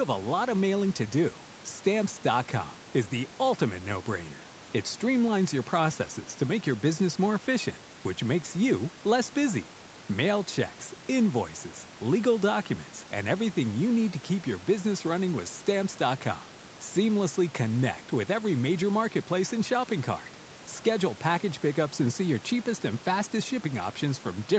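No faults are audible in the speech; the band stops at 8 kHz, as the call microphone processing and the Opus call path leave it, and the room noise sits about 22 dB below the speech.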